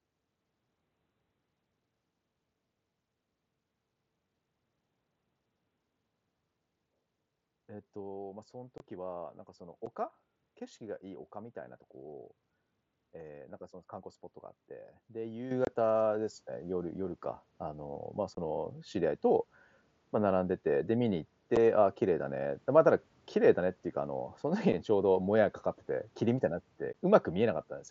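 Unconcealed Bluetooth headset packet loss at 8.78–8.80 s and 9.86 s: packets between headset and phone went missing and were replaced by silence, leaving abrupt holes of 22.5 ms and 7.5 ms. Microphone volume stepped up at 15.51 s: the input gain was raised in one jump of about 8 dB, so voice and background grow louder together. More packet-loss holes follow at 15.65–15.67 s, 18.35–18.37 s, 21.56 s, 24.72 s and 26.93 s, each a brief hard-edged dropout.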